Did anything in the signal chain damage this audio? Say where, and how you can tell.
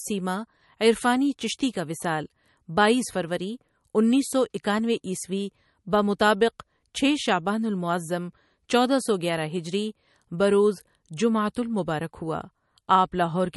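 Yes. The damage sits at the codec stage and runs through the whole speech clip. Nothing reaches above 11.6 kHz, which is a hard treble ceiling rather than a natural roll-off. The damage is plainly audible, with a watery, swirling texture and chirpy, metallic s sounds. That points to a low bitrate, around 43 kbps. The likely cause is MP3 compression. Starved of bits, the encoder cut the top band and let weak frequency lines flicker between frames.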